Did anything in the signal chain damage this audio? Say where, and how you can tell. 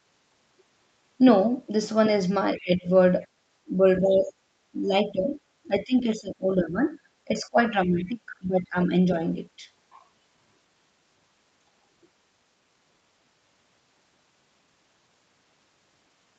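Yes. Call processing, speech suppressed in double talk: at 2.56–2.87, 4.02–4.32, 4.72–5.38, 5.64–6.82, 7.25–8.91 and 9.59–9.65 s the talker dips by up to about 20 dB. On the waveform the envelope sags, and the spectrogram thins out, likely because the echo canceller was damping both talkers at once.

Call processing, background gated by the echo canceller: from 3.27 to 3.43 s the room tone drops by about 19 dB. It shows as a near-empty gap in the noise floor before the canceller releases.

Call processing, the other side's voice leaking through: from 4.12 to 4.24 s a faint second voice sits about 25 dB below the speech. It appears as weak, separate harmonic traces on the spectrogram, likely left behind by incomplete echo cancellation.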